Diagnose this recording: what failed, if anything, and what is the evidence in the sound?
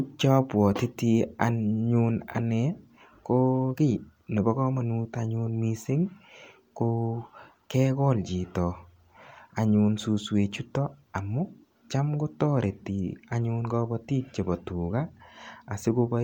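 The codec stage is the problem here: throughout the speech there's a plainly audible breathy, grainy edge, which is likely Bluetooth LC3 compression. The upper spectrum gets noise-filled rather than coded, at a rate that fits roughly 48 kbps with 10 ms frames. Bandwidth still reaches 20.2 kHz.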